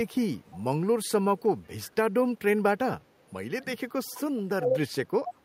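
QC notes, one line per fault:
0.46–0.63 s, 1.38–1.42 s and 1.82–1.90 s, echo leak: a faint copy of the speech returns 354 ms after the original, about 25 to 35 dB below it. The likely cause is a loudspeaker echo that the canceller failed to fully remove. It is one distinct repeat at a fixed delay, not a smeared room reverberation tail.
1.64–1.68 s, speech suppressed in double talk: the speech level drops by about 10 dB for 40 ms. The likely cause is an echo canceller that took overlapping talk for echo and turned everything down. The sound is attenuated but still present, unlike the hard silence of a dropout.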